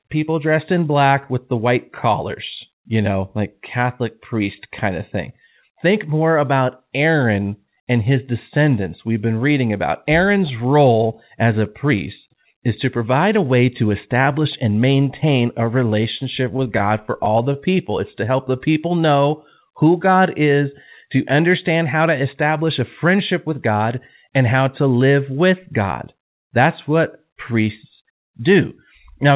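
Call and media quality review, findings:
Scattered short gaps, 15.65–18.14 s, right after "establish and maintain a". Around fifteen little ticks and smears where packets went missing or arrived late. The receiver's concealment patched each hole by stretching the last bit of sound. The holes are short, the longest only about 30 ms, so together they add up to something like 150 ms, roughly 7% of that stretch. The sound stays clear, just hiccupy.

Jitter buffer slow-down, 17.90–19.22 s, overlapping the tail of the gaps. Delivery runs at 93% speed with no pitch drop, and sounds get a bit drawn out. The jitter buffer was low and padded itself by repeating single pitch periods over and over, adding 100 ms in total.

Jitter buffer speed-up, 21.78–23.71 s, right after "is to". Things sound hurried, at 106% speed with pitch unchanged. The buffer was holding more than its target, probably after a clump of late packets landed together. 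It drained the excess by trimming one or a few pitch periods at a time, around 150 ms in total. All of this rides on a G.711 mu-law leg, with nothing above 4 kHz.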